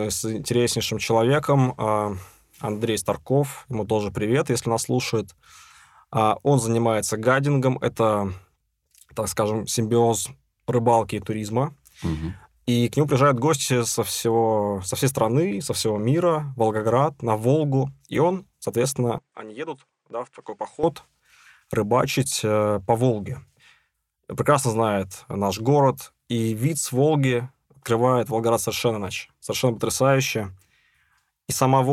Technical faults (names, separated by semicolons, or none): input switched to a poorer device